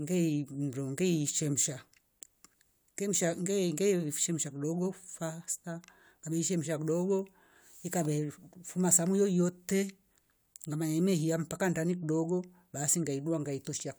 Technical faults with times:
none

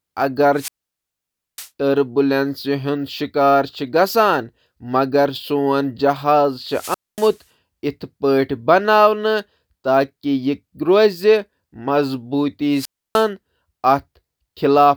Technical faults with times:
0.53-1.70 wireless microphone squelch dropout
6.63-7.43 wireless microphone squelch dropout
12.72-13.27 wireless microphone squelch dropout

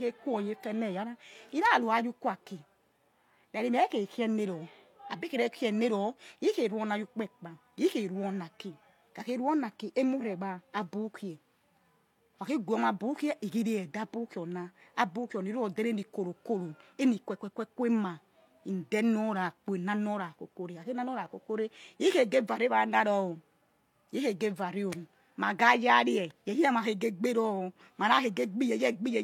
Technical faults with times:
0.00-29.24 low-bitrate audio saved at a high bitrate

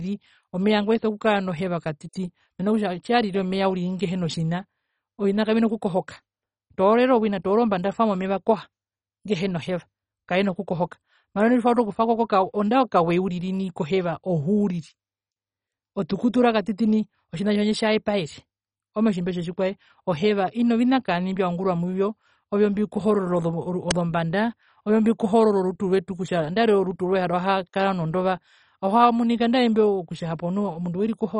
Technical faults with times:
0.00-31.40 MP2 compression
23.91 uninitialised buffer

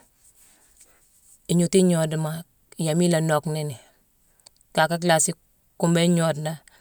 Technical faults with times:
none

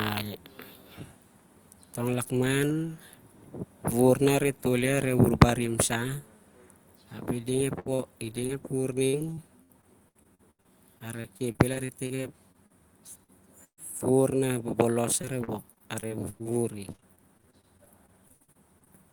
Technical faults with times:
7.79-7.87 burst of packet loss
7.95-8.01 short concealed packet loss
8.47-8.51 short concealed packet loss
9.07-12.72 repeated packet loss (robotic sound)
13.24-13.30 short concealed packet loss
13.64-13.79 burst of packet loss
15.21-16.51 repeated packet loss (robotic sound)
16.92-18.88 repeated packet loss (robotic sound)

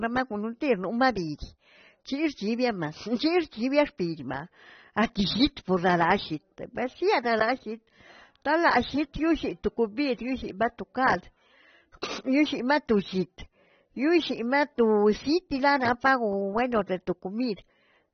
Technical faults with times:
0.00-18.13 AAC compression
17.56-17.58 pre-echo

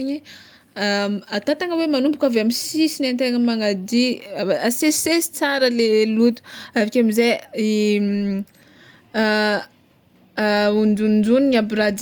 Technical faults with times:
none

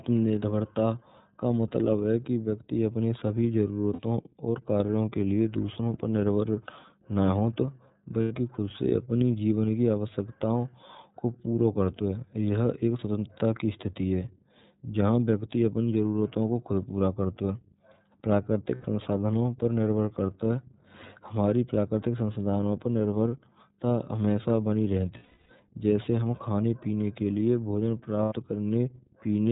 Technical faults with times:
0.00-29.51 iLBC codec
3.93-4.00 lost iLBC frames
8.22-8.32 lost iLBC frames
18.75-18.86 lost iLBC frames
25.17-25.51 lost iLBC frames
28.23-28.33 lost iLBC frames

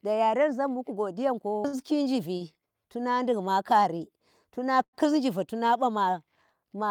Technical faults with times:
1.67-1.75 short stall from a late packet
2.37-2.42 short stall from a late packet
4.83-4.95 short stall from a late packet

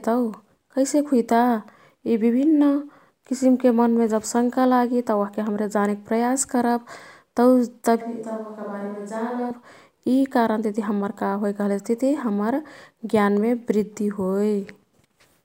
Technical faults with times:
8.01-9.50 switch to a distant microphone

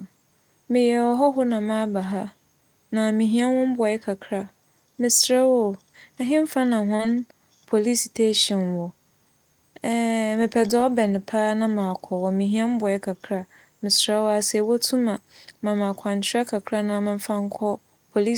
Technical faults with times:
6.95-7.02 short concealed packet loss

